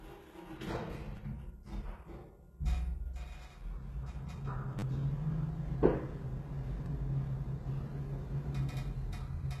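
Throughout the everyday sound, the treble is likely rebuilt by HE-AAC compression at a low bitrate, around 16 kbps. Nothing sits above 12.3 kHz, and the upper band has a synthetic, gritty sheen whose harmonics don't line up with the lower band, which is plainly audible.

At 1.17 s, 4.79 to 4.83 s and 6.86 s, a repeated buffer occurs: fresh audio arrived late, so playback looped the last short block, which fits a 10 ms buffer. The first and last repeat once and sound like brief clicks, while the middle repeats four times and becomes a short buzz.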